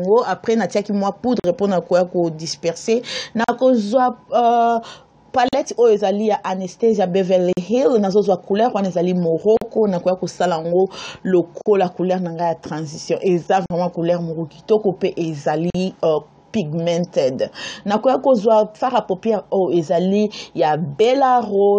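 Short dropouts of about 43 to 45 ms cut the sound at 1.40, 3.44, 5.49, 7.53, 9.57, 11.62, 13.66 and 15.70 s, each with softened edges before the sound resumes where it stopped. These are gaps at joins of encoded pieces, recurring roughly every 2 s: each separately encoded piece kept its encoder start delay and final-frame padding.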